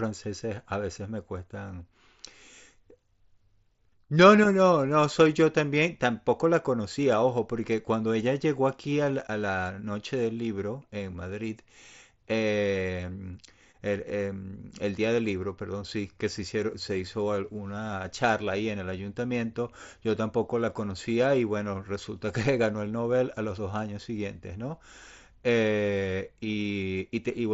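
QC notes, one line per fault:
No faults found; the speech carries the mSBC wideband Bluetooth headset character, band-limited at 8 kHz with that codec's light grain on louder passages.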